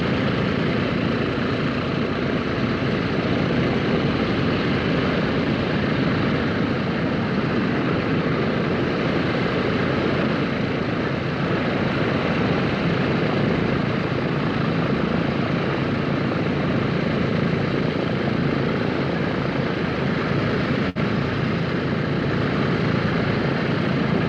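A burst of packet loss hits the audio at 20.89 s: several consecutive packets never arrived in time to be played, so the receiver concealed the hole by stretching the last sound it had and fading it down for roughly 59 ms, until 20.98 s. What you hear is a brief smeared, dwindling tail in place of the real signal, after which playback picks up about 60 ms further along, with that stretch of audio simply gone.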